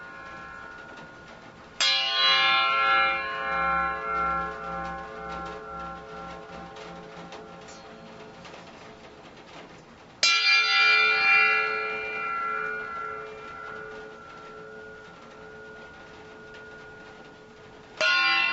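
A recording of everyday sounds carries gain pumping from start to finish: the level ducks by around 5 dB each time a loud sound arrives, so it breathes in step with the events. The likely cause is a microphone gain set far too high, with a fast limiter or compressor clamping down on each peak. On a waveform the envelope looks flattened, with loud and soft passages squeezed close together. On a spectrogram the sound dims under each event, with nothing above 8 kHz, consistent with call-style microphone processing.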